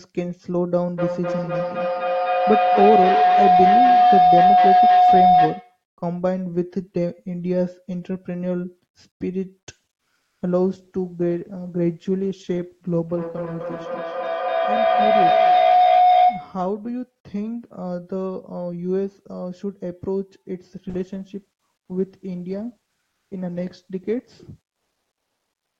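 From 0.97 to 5.84 s a tone of around 700 Hz swells to about 7 dB above the speech, repeating roughly every 300 ms. This is a feedback howl: a microphone and loudspeaker on the same call form a loop that gains level on each pass and settles on the frequency the loop favours.

At 10.21 to 10.39 s and again at 23.11 to 23.29 s, the background turns smooth and featureless for 180 ms. It drops about 1 dB the first time and about 9 dB the second. This is comfort noise in place of the background, likely from discontinuous transmission, with synthetic noise standing in for the real ambience during a pause.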